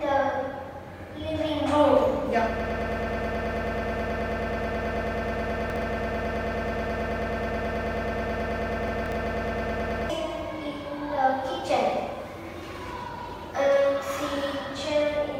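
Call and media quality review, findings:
Broken-record loop, 2.60–10.10 s: a 0.11 s fragment repeats about 70 times, likely from a stalled player or decoder buffer. The waveform shows an identical tiled block; the spectrogram shows vertical striping.

Chunks out of order, 5.70–5.82 s and 8.88–9.12 s: 60 ms chunks land one and three chunks late, causing a jumbled moment. The spectrogram shows hard vertical seams at the joins.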